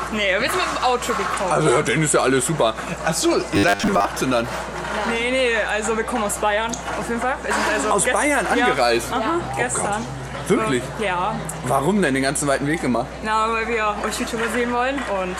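Mains hum runs throughout: a steady 60 Hz tone about 20 dB below the signal, with low harmonics, from power-line interference such as a ground loop. From 3.56 to 4.05 s, the sound turns into a rigid, metallic 100 Hz buzz, likely robotic sound from repeated short buffers, where 10 ms fragments are looped while most of the real audio is skipped.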